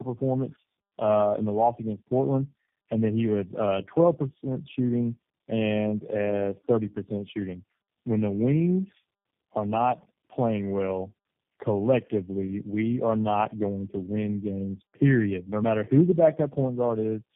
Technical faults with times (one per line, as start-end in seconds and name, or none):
0.00-17.36 tandem speech coding